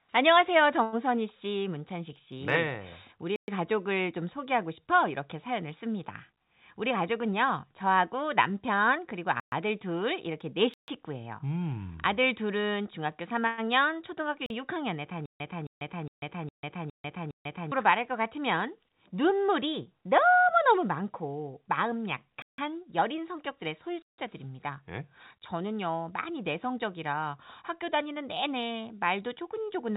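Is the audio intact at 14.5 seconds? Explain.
No. A block of digital silence runs from 14.46 to 14.50 s, a 40 ms gap in the speech. For that span the sound drops out and then returns, with no fade in either direction. A hole this short points to an output buffer that wasn't filled in time. With its abrupt edges, it comes across as a brief pop-like dropout.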